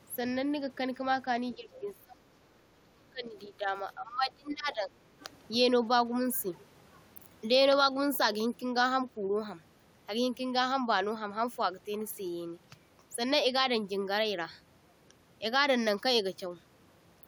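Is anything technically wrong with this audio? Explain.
Yes. Speech suppressed in double talk occurs from 1.55 to 3.69 s and again from 3.95 to 4.92 s. The likely cause is an echo canceller that met overlapping talk from both ends, could not tell this talker from the returning loudspeaker echo, and pulled the level down. The voice sinks by roughly 25 dB at its lowest in the first stretch and around 20 dB in the second, so it dips and sounds half-gone.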